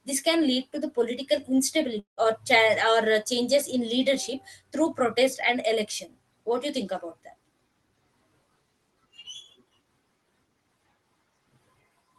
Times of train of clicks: none

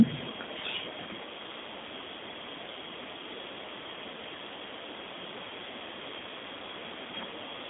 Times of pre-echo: none

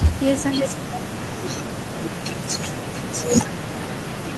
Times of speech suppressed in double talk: 0.53-4.37

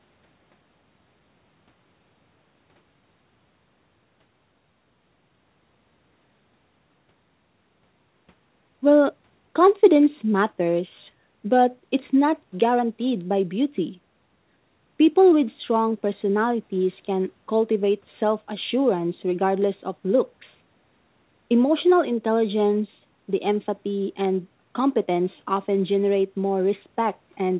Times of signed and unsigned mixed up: none

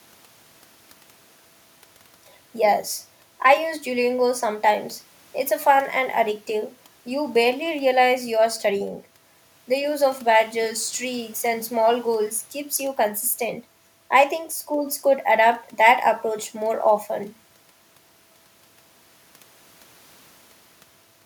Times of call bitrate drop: none

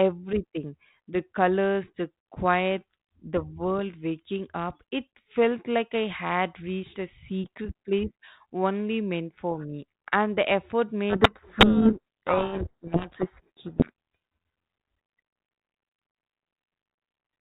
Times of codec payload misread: 11.10-14.15

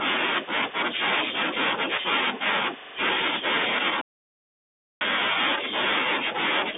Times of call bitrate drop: none

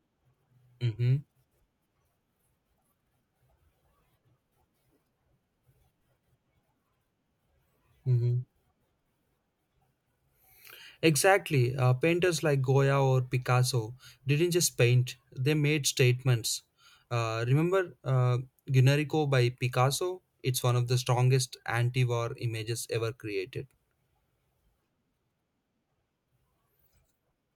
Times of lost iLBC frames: none

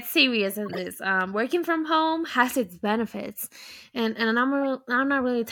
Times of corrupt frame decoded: 0.66-0.79

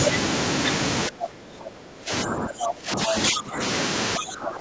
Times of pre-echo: none

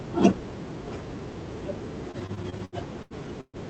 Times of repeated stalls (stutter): 2.11-3.57

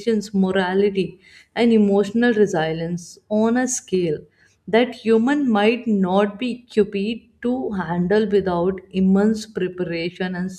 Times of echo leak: none

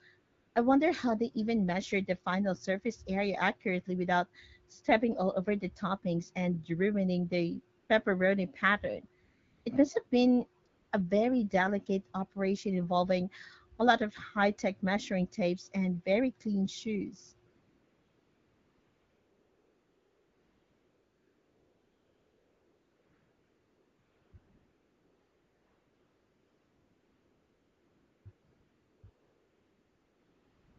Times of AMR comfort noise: 0.19-0.55, 7.79-7.89, 9.25-9.65, 10.07-10.11, 10.63-10.91, 17.51-30.78

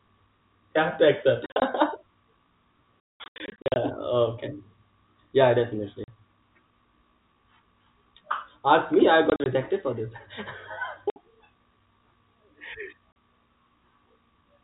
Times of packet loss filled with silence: 1.46-1.62, 3.03-3.76, 6.04-6.08, 9.30-9.46, 11.10-11.16, 13.12

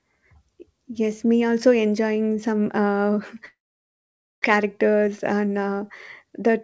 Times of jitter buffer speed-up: 4.53-5.80, 6.24-6.61

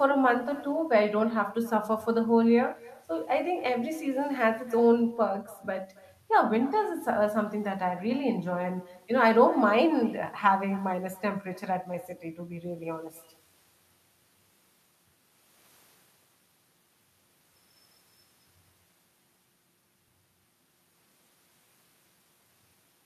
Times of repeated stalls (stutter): none

